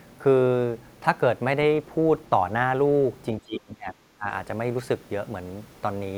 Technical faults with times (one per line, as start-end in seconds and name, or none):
3.45-4.27 speech suppressed in double talk